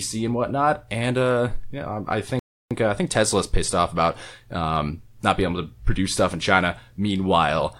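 Playback stall at 2.39 to 2.71 s: the speech goes silent for 0.32 s after "uh yeah um I", likely from the player running out of data, then resumes at "uh I think".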